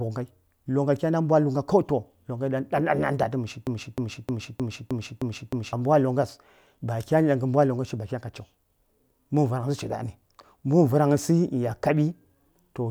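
The player or stream likely stalled and resent its last fragment, so from 3.67 to 5.73 s a 0.31 s piece of speech repeats seven times, a broken-record loop.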